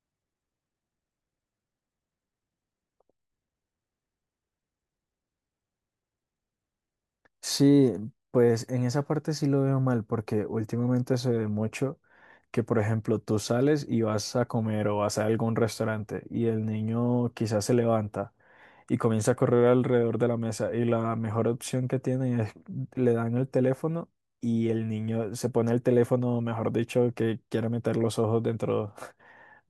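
A recording of speech, with no technical fault to report. Nothing in it calls for a time, a value or a cause.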